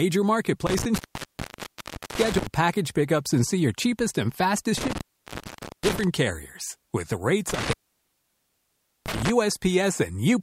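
Intermittent contact drops the speech out at 0.67–2.47 s (open about 1.17 s, just before "package pickups and see"), 4.78–6.04 s (0.85 s, after "see your cheapest and") and 7.50–9.29 s (1.33 s). A loose connection opens, leaving faint hiss between crackles. The waveform shows near-flat gaps, and the spectrogram shows broadband vertical clicks at each edge.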